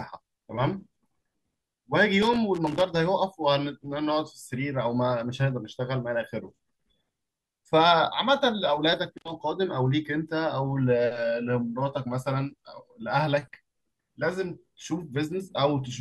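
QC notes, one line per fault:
2.22–2.81 s, loose connector crackle: a worn or dirty contact is making and breaking as something shifts, chopping the speech into an irregular scratchy burst.
9.18–9.30 s, loose connector crackle: a shorter repeat of the same intermittent contact.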